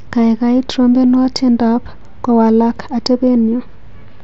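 Nothing is technically wrong with this speech clip.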